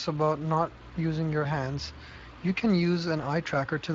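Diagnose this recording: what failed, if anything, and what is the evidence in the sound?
The codec stage failed: Speex coding throughout the speech starves the CELP excitation of bits, leaving a plainly audible noisy, hoarse grain over every syllable from start to finish. The consistent texture fits a Speex mode running at roughly 20 kbps.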